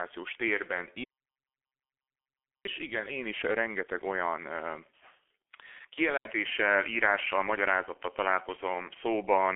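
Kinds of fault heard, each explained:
G.723.1 codec: the whole clip runs through this old low-rate telephony codec at about 6.3 kbit/s, squeezed into a 300 to 3400 Hz line band with nothing above 3.6 kHz, so the speech comes out muffled and hoarse with smeared consonants. The damage is heavy.
Audio dropout to silence: from 1.04 to 2.65 s the sound just vanishes into dead digital silence, about 1.6 s with no room tone at all. That's most likely the input dropping out while the recorder kept writing silence, so whatever was said there is gone.
Input switched to a poorer device: at 6.17 s there's a short gap of about 80 ms, and from then to the end the speech sounds duller and boxier, topping out near 3.2 kHz. The level shifts by about 5 dB and a new noise floor sits roughly 45 dB down, likely a change to a worse microphone.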